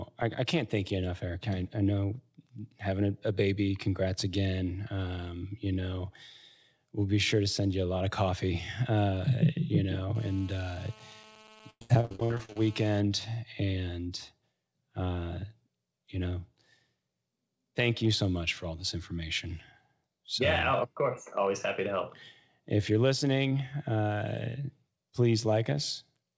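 From 10.15 s to 13.0 s, just after "of coffee uh you", a GSM phone buzz sits under the speech. A 2G phone nearby is in a call. It transmits in bursts about 217 times a second. The audio circuit rectifies those radio pulses into sound. The result is a hard, raspy buzz at 217 Hz with many harmonics. It runs steady for the whole stretch, unrelated to the speech, at about 21 dB below it.

Inside that buzz, from 11.70 s to 12.60 s, repeated packet loss makes the speech robotic. Packets go missing or arrive late again and again. Each hole is covered by stretching the last bit of sound, and another hole follows right behind. More than half of this span is patched sound. The longest hole is 108 ms. The speech turns choppy, with pieces missing. It is band-limited by the call codec, with nothing above 8 kHz.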